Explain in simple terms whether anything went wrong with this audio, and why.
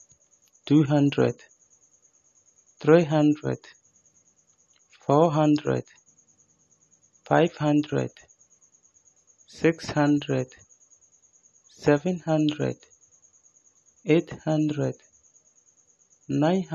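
Low-bitrate audio saved at a high bitrate, from start to finish: the speech has nothing above about 14 kHz, so the top end is missing. This is likely because the recording was first squeezed into a small, low-quality file, then saved again as a much larger one. The larger file cannot bring back the detail the first step threw away, so the missing top end and the earlier damage remain throughout.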